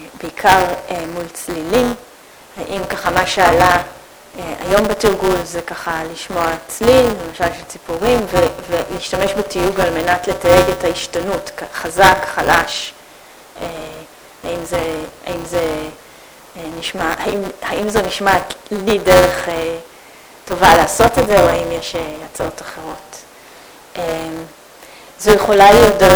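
Buffer tearing runs throughout. Writer and reader cross inside each 5 ms buffer, so about a tenth holds audio roughly 10 ms old. A 200 Hz robotic buzz follows the signal.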